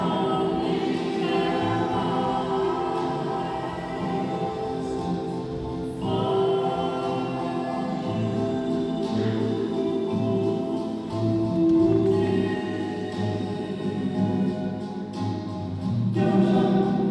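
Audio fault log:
No faults were found in this clip. There is nothing further to log.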